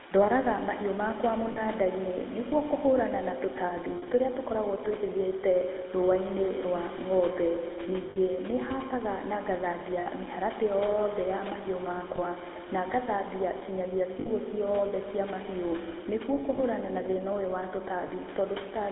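Across the whole clip, the speech carries the GSM full-rate codec's buzzy, gravelly grain, plainly audible and consistent with a 13 kbps full-rate stream. The codec rebuilds the voice from a vocal-tract model fed by a coarse pulse excitation, which produces that rasp. The line passes only about 250 Hz to 3.6 kHz. On a spectrogram, energy stops sharply near 3.6 kHz and harmonics look smeared and grainy. Room noise sits about 18 dB beneath the speech.

Lost GSM frames break in eight times, at 1.52, 3.96, 8.1, 10.0, 12.16, 14.2, 16.56 and 18.08 s. They last 40 ms, 60 ms, 60 ms, 60 ms, 20 ms, 60 ms, 20 ms and 20 ms respectively, in steps that fit 20 ms frames. The decoder repeats the last good frame's settings, so each gap becomes a short metallic ring. On a spectrogram the formants freeze into flat horizontal streaks, and the waveform shows a repetitive stretch.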